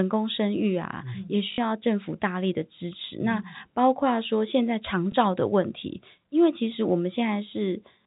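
Packet loss with last packet repeated at 1.52 s (60 ms) and 5.12 s (20 ms) makes the speech stutter robotically at the first and gives a small blip at the second, which fits 20 ms packets.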